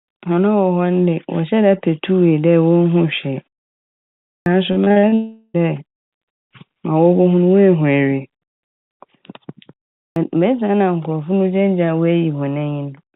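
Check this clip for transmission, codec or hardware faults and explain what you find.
Three kinds of fault are audible in this speech clip, all clustered around two pauses and one stretch of unstable delivery, heard through a narrowband call path with nothing above 4 kHz, consistent with G.711 mu-law at 64 kbps.

Clipped start after a pause, at 4.35 s and again at 10.06 s. After silence, the playback device appears to drop into a low-power or unlocked state and needs a moment to come back. At 4.35 s, following a pause of just under a second, roughly 0.11 s of onset is swallowed. At 10.06 s, after a shorter 0.36 s pause, about 0.10 s is lost. Both times the sound leaps in abruptly, missing its opening.

Repeated packet loss (robotic sound), from 4.72 to 5.14 s. Over this span the stream suffers six separate gaps, the longest about 42 ms. The receiver patches each one by extending the preceding audio, so roughly 43% of the stretch is synthesized fill rather than real signal. 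Because the holes arrive in quick succession, the concealment never settles, giving a choppy, metallic, robotic texture with fragments dropped out.

Long network dropout, from 5.14 to 5.56 s. Immediately after the choppy stretch, about 0.4 s of audio never arrives, most likely a network outage. The receiver fills nearly all of it by stretching the last sound into a fading buzz-like tail, with only a very brief moment of true silence. When the signal resumes at 5.56 s it picks up further along, and the missing portion is simply gone.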